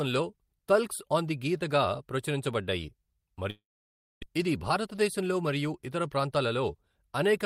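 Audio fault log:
3.50 to 4.24 s, long network dropout: the speech smears into a fading buzz, then silence, resuming about 500 ms further on, likely from packets never arriving.
4.32 to 6.84 s, jitter buffer speed-up: speech runs about 8% fast at unchanged pitch, as tiny pitch-period chunks get trimmed to shed roughly 200 ms of backlog.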